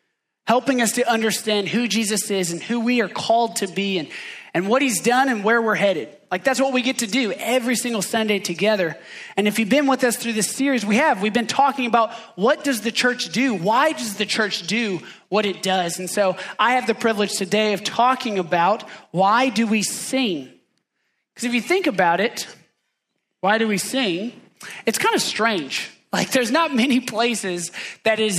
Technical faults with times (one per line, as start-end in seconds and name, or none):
none